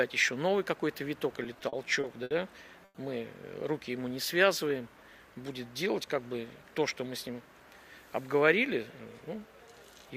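Between 1.43 and 2.32 s the audio shows repeated stalls (stutter). It halts six times. Each gap is filled by extending the last sound, 170 ms in total, the longest 70 ms. Nothing is lost. Packets were arriving too late for playback, so the jitter buffer kept running dry. From 2.85 to 2.96 s comes a call audio freeze. The last sound is held for 100 ms, and the final 30 ms of that is silent. Then the audio resumes where it stopped, now 100 ms later. The likely cause is packets held up in transit, emptying the buffer. Two jitter buffer speed-ups follow. From 4.96 to 5.36 s the audio runs at 111% speed, and about 50 ms is cut. From 8.34 to 9.13 s it runs at 105%, losing about 40 ms. Pitch stays the same, but both passages sound hurried. The receiver was trimming short pitch-period pieces to shrink a buffer that had grown too full.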